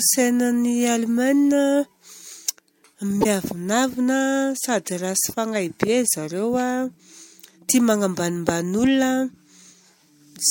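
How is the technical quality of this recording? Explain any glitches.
One glitch stands out in the speech. From 3.21 to 3.26 s, a corrupt frame decoded. Damaged bits in roughly two compressed frames were played anyway, scattering energy to wrong frequencies. It sounds like a brief, loud chirp, squeak, blip or burst of noise.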